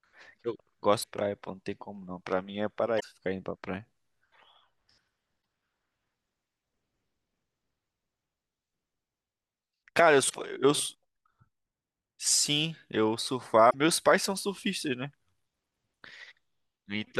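Speech with damaged data in a compressed stream at 1.00–1.04, 2.97–3.04, 5.39–5.41, 10.26–10.34 and 13.67–13.75 s. Corrupted frames throw the decoder out of sync, producing brief chirps or blips. A spectrogram shows short broadband smears, and the waveform shows abrupt discontinuities.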